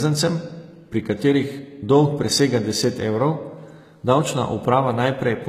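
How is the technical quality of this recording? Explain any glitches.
The technical quality is compromised by plainly audible compression damage across the whole speech clip. From start to finish, the treble sounds synthetic. This points to HE-AAC compression, likely at a very low rate, around 20 kbps. Only the lower band is coded. Upper frequencies are copied up from below, so sibilants come out gritty, metallic or lisping.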